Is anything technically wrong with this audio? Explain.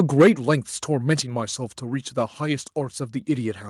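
Yes. From 0.0 to 0.28 s there is microphone overload. Input gain likely ran about 6 dB past the converter's limit, clipping a small share of samples into flat-topped waveform peaks, heard as harsh crackle with broadband vertical smears on a spectrogram.

Microphone volume stepped down at 0.22 s and again at 1.23 s, each time by about 4 dB, likely automatic gain control reacting to a microphone it judged too loud or clipping. Voice and background both drop abruptly, seen as a sudden step in the waveform envelope and uniform dimming across the spectrogram.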